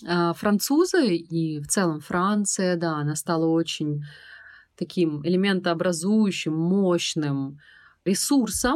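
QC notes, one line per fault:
No faults heard in this speech clip.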